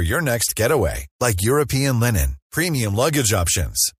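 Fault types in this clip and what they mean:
Nothing stood out on listening to the speech: no dropouts, clicks, distortion or other technical faults were heard.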